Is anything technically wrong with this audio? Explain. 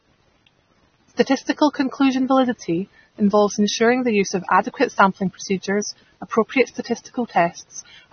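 Yes. Throughout the speech, nothing sounds above 6.3 kHz and sibilants carry a fizzy, warbling smear, likely AAC compression at a bitrate near 24 kbps. The encoder drops and coarsely quantises high bands, so unlike a plain low-pass filter, the remaining spectrum itself sounds unstable.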